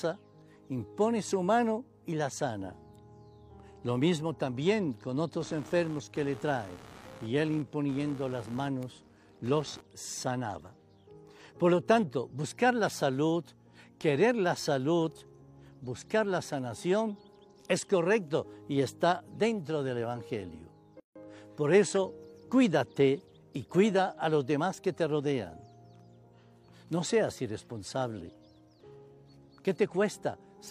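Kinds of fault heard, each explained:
Computer activity noise: changing processor or peripheral load disturbs the shared audio ground, leaving a buzzing pulse around 70 Hz, roughly 25 dB below the sound, from 5.40 to 9.81 s.
Gap at a join of encoded pieces: separately encoded sections were joined with their start delay and end padding intact, cutting a 156 ms gap with smeared edges at 21.00 s.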